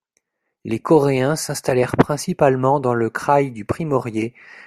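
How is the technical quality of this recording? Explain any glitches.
No glitches turn up here, so there's nothing to explain and the recording holds up fine from a technical standpoint.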